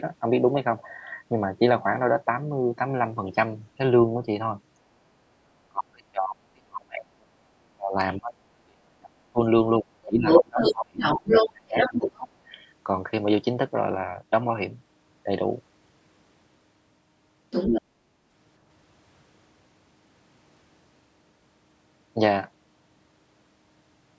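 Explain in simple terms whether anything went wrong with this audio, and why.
Both people on the call talked at the same time, and the echo canceller likely couldn't tell this talker apart from the loudspeaker echo, so it turned everything down. That is speech suppressed in double talk: the voice sinks deeply or drops out from 5.41 to 9.4 s, 9.79 to 11.05 s and 11.41 to 12.32 s.

The other side's voice is also leaking through. The talker's device plays the far end on a loudspeaker, and the echo canceller likely left some of it in the microphone signal. That second voice comes through from 10.03 to 12.16 s, about as loud as the talker or louder. It returns briefly from 17.51 to 17.82 s at about the same level as the talker.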